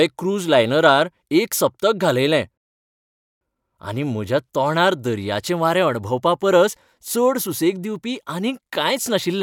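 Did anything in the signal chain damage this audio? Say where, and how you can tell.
Yes: a rebuffering stall at 2.58 s interrupts playback, and the speech falls silent until 3.41 s, adding about 0.84 s to the clip. The fault is at the playback stage, where delivery fell behind. The player drained its buffer of downloaded audio, halted output while waiting for more data, then continued from exactly the point where it stopped. The telltale sign is that the speech picks up mid-flow with nothing skipped, so the gap lengthens the clip without losing any content.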